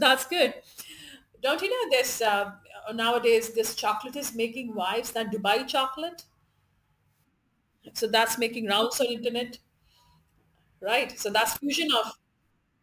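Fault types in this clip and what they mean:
Aliasing: The speech was resampled without a proper low-pass filter first, which fits a drop from 44.1 kHz to 32 kHz. Content above 16 kHz folds back below it as false tones. Sibilants sound gritty throughout, with alias energy roughly 20 dB below the speech.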